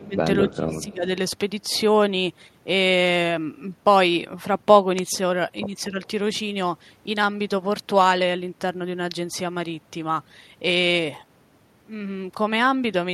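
The speech dips right at the start, from 0.0 to 0.17 s, falling by around 15 dB, and again more deeply between 0.44 and 1.05 s, where it is pulled down by roughly 20 dB for about half a second in total. This is speech suppressed in double talk. The echo canceller was likely unable to tell this talker apart from loudspeaker echo while both sides spoke, so it attenuated everything.

Inside that second dip, from 0.51 to 0.56 s, a faint delayed copy of the voice slips through, trailing the original by 245 ms and sitting far below it, around 30 dB down. That is echo leak. The far end's canceller likely failed to remove all of the loudspeaker sound its microphone captured and sent that remnant back.

At 5.91 to 5.97 s a brief, shallow dip of only a few decibels recurs, again likely from double-talk suppression.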